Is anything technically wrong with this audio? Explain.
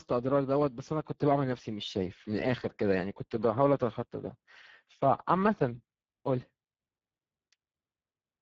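Yes. Throughout the speech, Speex codec damage is plainly audible. This CELP coder rebuilds the signal from a vocal-tract filter plus a coded excitation. At this low setting, which points to a bitrate of around 10 kbps, the excitation gets too few bits, so voiced sounds turn hoarse and noisy. Unlike a plain low-pass filter or MP3 smearing, the damage is a rough, buzzy graininess inside the voice itself, not just dullness or swirling treble.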